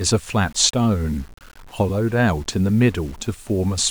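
Low bit depth without dither runs throughout the speech. Samples were likely rounded to about 7 bits with no dither, so the error tracks the signal: quiet passages turn gritty, with grainy distortion sitting roughly 30 dB below the speech.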